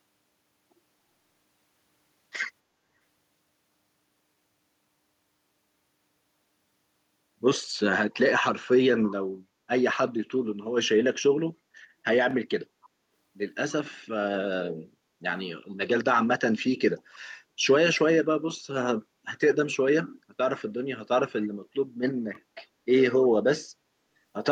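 It's a speech clip with two short scraps of echo leak: a faint one at 17.94 to 17.98 s, about 30 dB under the speech, and a clearer one at 23.18 to 23.27 s, about 20 dB down. Both trail the talker by 286 ms. That fixed lag points to the same cause each time, likely a far-end speakerphone whose echo canceller let a bit of our own voice slip back through its mic.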